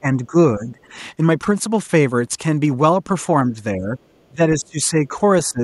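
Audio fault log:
0.00–0.36 s, 0.58–0.95 s, 3.76–5.15 s, 5.49–5.62 s: speech suppressed in double talk. Speech is briefly pulled down by about 15 dB, and by about 20 dB in the long third stretch. The likely cause is an echo canceller attenuating the near talker while the far side talks.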